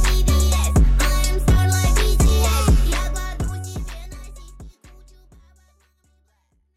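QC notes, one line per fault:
Nothing stood out on listening, the only change being a smooth editor's fade-out that begins at roughly 2.5 s and reaches silence at 6.77 s.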